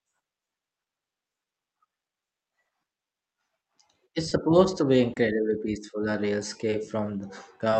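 The sender's clock runs roughly 2% slow against the receiver's, so this is clock drift between sender and receiver. The jitter buffer keeps draining rather than holding steady, and the speech carries small, unevenly spaced timing hiccups from start to finish.

From 0.40 to 2.41 s, the receiver makes repeated timing corrections. It stretches the speech to 98% speed and adds roughly 50 ms in total, repeating tiny pieces to cover the slow supply. The result is a faintly dragging, unsteady tempo with occasional slight stutters.

The buffer also runs empty five times, each a short stall from a late packet: 30 ms filled at 2.62 s, 20 ms at 4.29 s, 30 ms at 5.13 s, and 20 ms each at 6.70 and 7.70 s. Each time, the last sound is held until the packet arrives, so nothing is lost but a sound briefly sustains with a small buzz or dip.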